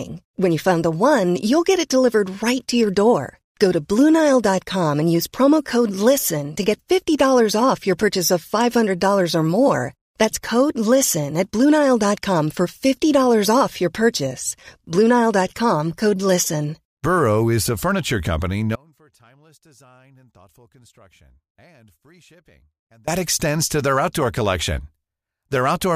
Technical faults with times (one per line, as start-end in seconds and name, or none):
18.75-23.08 audio dropout to a faint residue